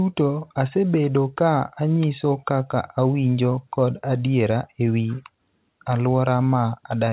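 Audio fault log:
No faults logged; the speech arrives over a normally working WebRTC call path, its G.711 A-law coding at 64 kbps leaving nothing above 4 kHz.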